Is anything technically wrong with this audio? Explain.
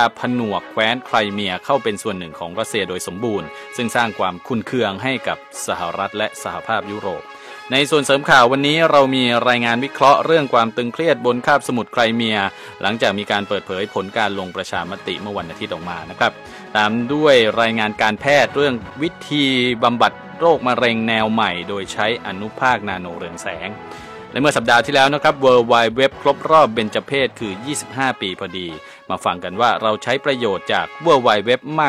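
No, nothing stood out as a technical problem on listening.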